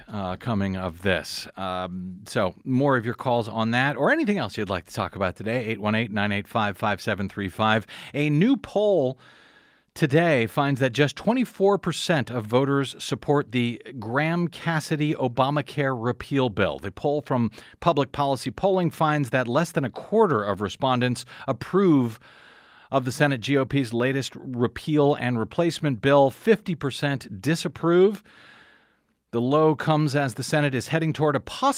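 The recording contains no audible technical faults.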